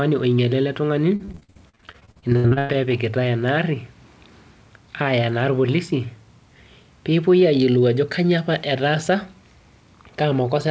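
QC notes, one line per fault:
1.16–2.75 s, repeated packet loss (robotic sound): right after "onyaala ele ltung'ani", gaps up to 103 ms recur rapidly, nearly half patched with repeated sound, giving choppy sound with pieces missing rather than one clean dropout.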